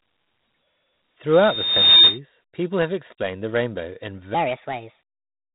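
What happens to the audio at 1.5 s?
A microphone is picking up the loudspeaker it feeds, and at one frequency the loop gain has risen above one, so a loudspeaker feedback squeal runs from 1.33 to 2.19 s. At 1.5 s the squeal is still climbing. A single tone near 3.7 kHz feeds on itself, taking most of a second to build to a level of about 15 dB over the speech before it stops.

Underneath, the whole clip has passed through heavy 4-bit ADPCM compression. Each sample is coded as a coarse step from a predicted value, and the quantisation error rides on the signal, so at 1.5 s the speech carries a gritty hiss that grows with its loudness. Nothing reaches above 3.9 kHz, a limit that points to a low sample rate and fits a 32 kbps stream. This dulls the top end, and the squeal sits just under that ceiling.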